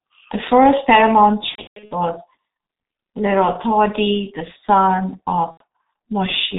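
Speech coded throughout with the G.723.1 codec, heavily damaged, at a rate that fits its 6.3 kbit/s mode. It sounds muffled and hoarse with smeared consonants. A spectrogram shows nothing above 4 kHz, and the harmonics look coarse and slow to change from one 30 ms frame to the next. VoIP packet loss concealed by the speech codec appears twice. The first is after "first paramount", from 1.49 to 1.92 s: repeated dropouts, the longest about 150 ms, are covered by the decoder stretching its last pitch and filter into a fading sound, and the voice stays weak afterwards. The second is after "the son", from 5.51 to 5.63 s, a brief concealed fade about 90 ms long.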